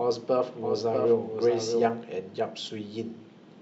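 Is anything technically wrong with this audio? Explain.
Yes. From the very start until 1.9 s, the speech carries a doubled audio track. A second, full-band copy of the same audio runs roughly 700 ms behind, about 5 dB quieter. The likely cause is the signal being captured twice, once through a slower path, so both copies are mixed together out of step. It sounds like a flat, dry echo repeating each phrase, with no room decay, and it cuts off abruptly at 1.9 s.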